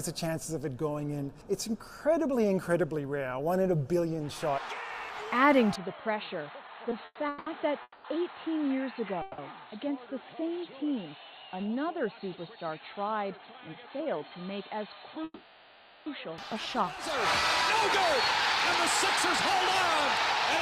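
At 5.76 s the audio abruptly turns dull and boxy, losing everything above about 4.3 kHz, dropping about 5 dB in level and picking up a faint new noise floor well below the signal. There is no silence at the transition, and full bandwidth returns at 16.38 s. That narrowband stretch most likely comes from the input switched to a poorer device, such as another microphone or a headset in its call profile. Within that stretch, from 6.67 to 7.48 s, the sound drags and stutters through four brief hangs totalling 310 ms, the longest 180 ms. This is repeated stalls (stutter). Packets kept reaching the receiver late, so its jitter buffer emptied again and again, and each time it stretched the last sound until data resumed. Nothing is lost, only delayed. Three single holds follow, each a fading continuation of the preceding sound before the audio resumes where it stopped. The first runs from 7.82 to 8.06 s, about 220 ms, ending in roughly 30 ms of silence. 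The second runs from 9.22 to 9.40 s, about 160 ms. The third runs from 15.24 to 16.08 s, about 820 ms, with a short silent moment near its end. These are call audio freezes, likely caused by packets held up in transit until the buffer ran dry, leaving inserted gaps with nothing actually missing. Between 13.68 and 14.32 s the audio sounds hurried, playing at about 111% speed with unchanged pitch, as about 70 ms is trimmed away. That is a jitter buffer speed-up: having accumulated excess audio, the receiver cut out short pitch-period slices in quick succession to bring its delay back down.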